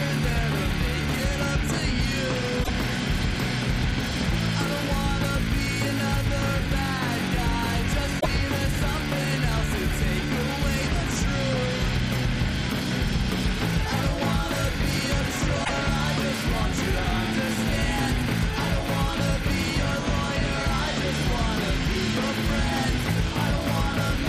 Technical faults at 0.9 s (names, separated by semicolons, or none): none